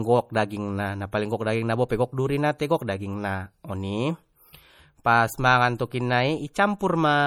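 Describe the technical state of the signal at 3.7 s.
At 3.7 s the speech carries the same MP3 compression damage heard across the whole clip, likely from a low bitrate around 48 kbps. Starved of bits, the encoder drops weak frequency lines that flicker frame to frame, so it sounds watery and swirly, with metallic chirps on s sounds.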